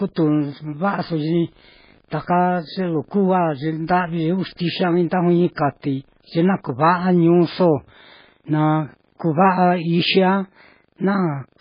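From start to end, treble stops at 5 kHz and the speech sounds heavily watery and swirly, likely MP3 compression at a bitrate near 16 kbps; plain low-pass filtering would not warble.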